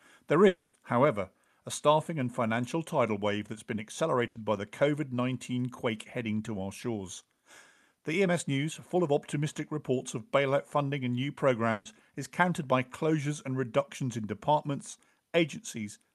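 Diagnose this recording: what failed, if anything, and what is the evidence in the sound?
Near the start, from 0.47 to 0.75 s, the sound stops and is replaced by a synthetic continuation of the last sound, about 260 ms in all, that fades and ends in about 50 ms of near silence before the audio resumes further along. This points to a long network dropout, likely, with the receiver's concealment covering the gap. On a spectrogram the harmonics smear into flat horizontal bands that dim to almost nothing, then real speech restarts abruptly. The waveform shows a decaying envelope, then a short flat stretch.

Two shorter gaps fit a burst of packet loss at the network stage. The first runs from 4.27 to 4.37 s, after "tidal wave that's been" and before "by the", with about 80 ms filled by a fading continuation of the last sound. The second runs from 11.71 to 11.87 s, after "bailout funding and new" and before "is countered by closures", with 140 ms concealed and no silent stretch. 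On a spectrogram each appears as frozen, blurred formants that weaken, with a hard edge where real audio returns. The Opus call path's roughly 12 kHz bandwidth ceiling stays constant across both gaps.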